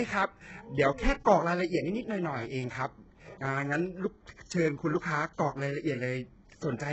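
The whole speech clip carries heavy HE-AAC compression damage. Nothing reaches above 8 kHz. The bitrate sounds very low, around 8 kbps. The treble is likely rebuilt from copied lower bands rather than coded. Its harmonics don't line up, so s sounds turn gritty and metallic.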